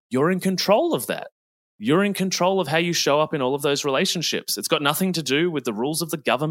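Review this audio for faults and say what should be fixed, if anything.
No faults turned up in this audio, so nothing needs to be fixed.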